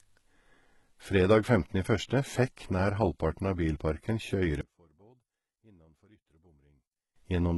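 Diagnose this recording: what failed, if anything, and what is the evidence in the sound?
HE-AAC compression, throughout: a codec-stage fault with heavy damage. The treble is likely synthesized by copying lower bands upward, so s sounds turn gritty, which fits about 16 kbps.

One channel inverted, 4.61 to 7.16 s: the speech drops about 32 dB in the mono sum. A likely wiring-stage polarity reversal cancels the shared content, leaving only the channels' mismatch.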